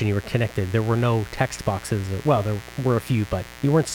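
A mains buzz runs from start to finish, sitting roughly 20 dB below the speech. Sharp switching spikes at twice the 60 Hz supply frequency have leaked into the signal path, spreading harmonics into the kilohertz range and producing a constant, gritty rasp beneath the talker.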